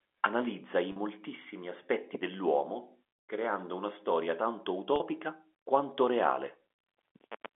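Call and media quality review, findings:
Packet loss with pitch repetition, 0.92–0.96 s: brief held, buzzy tone bridging a 40 ms gap. Receiver concealment repeats the last pitch period. Gap length fits two 20 ms packets dropped in transport.

Second instance, 4.96–5.00 s, just after "creando una storia tanto": the same 40 ms held buzz with the same concealment and the same two-packet pattern. The surrounding band, roughly 250 Hz to 3.4 kHz, reflects the G.711 telephone coding on the line.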